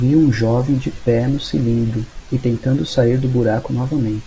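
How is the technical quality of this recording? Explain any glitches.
No glitches can be heard anywhere in this recording.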